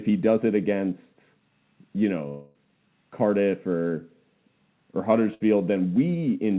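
Long network dropout, 2.28 to 2.59 s: about 260 ms of audio never arrived, likely from a stall in the connection. The receiver filled the gap for roughly 270 ms by extending the last sound as a buzz or hiss that fades, then the speech resumes further on with that stretch gone.

Short concealed packet loss, 3.88 to 3.92 s: a 20 ms piece of the stream missed the decoder. The receiver patched it by continuing the preceding sound and blending back into the real signal, so it comes through as a brief smear or wobble.

Burst of packet loss, 5.34 to 5.42 s: about 60 ms of consecutive audio was lost or arrived too late to play. The receiver extrapolated the last sound and turned it down across the gap, producing a short fading buzz or hiss before the speech picks up beyond the missing part.

The whole clip passes through a G.711 A-law call path, which leaves nothing above 4 kHz and gives the narrowband telephone sound.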